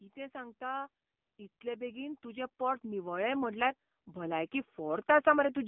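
Speech heard through an AMR narrowband mobile codec for the whole clip, with the damage heavy: the voice is buzzy and synthetic, squeezed into a telephone band of roughly 150 Hz to 3.5 kHz with nothing above 3.5 kHz. The coarse, pulse-driven vocal-tract rendering points to a low AMR-NB mode, around 6.7 kbps, where too few bits per 20 ms frame leave the voice thin and artificial. The call microphone processing's high-pass only trims the deepest bass. There are also two stretches of automatic gain rising, where the gain control judges the input too quiet and slowly turns it up, lifting voice and background together. The first, from 0.14 to 0.98 s, is a mild swell of about 3 dB. The second runs from 1.61 to 5.07 s and climbs about 12 dB, so the level keeps creeping upward for over three seconds instead of holding steady.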